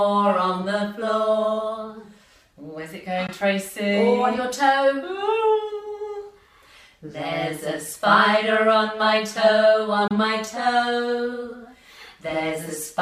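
At 3.27 to 3.29 s and again at 10.08 to 10.11 s the sound cuts to silence with abrupt or briefly faded edges, losing about 13 ms and 27 ms. These are likely Bluetooth dropouts: late packets were discarded, consistent with one and then two lost packets, and playback resumes as though it had run on.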